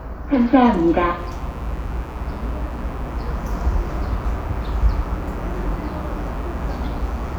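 From 1.15 s to the end of the clip, mains buzz sits under the sound: a steady, raspy drone built on 60 Hz and its harmonics, which stretch up into the low kilohertz. Sharp switching spikes, of the kind a dimmer, rectifier or unshielded run produces, are being picked up twice per mains cycle, giving the buzz its edge. It stays constant at roughly 25 dB below the wanted sound and never drops out.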